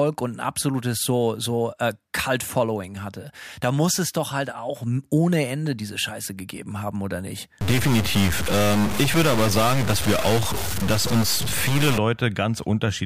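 From 7.61 to 11.98 s, after "gegeben haben oder nicht", the speech turns harsh and buzzy. This is a stuck bit, likely from a faulty converter or data line. About half the samples are off by a step around -20 dBFS. Pauses fill with noise.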